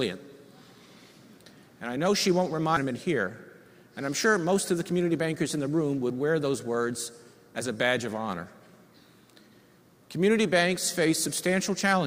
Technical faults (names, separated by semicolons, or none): stream segment skipped